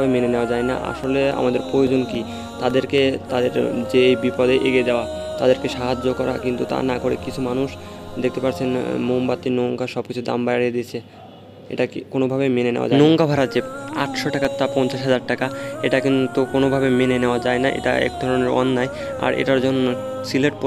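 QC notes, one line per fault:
0.76–2.98 s: CD scratch ticks, nine short clicks about four per second, the longest about 3 ms, as unrecoverable data recurs on each disc revolution.
13.89–15.28 s: CD scratch ticks, six brief ticks at roughly four per second, the longest about 3 ms, from a blemish defeating error correction once per turn.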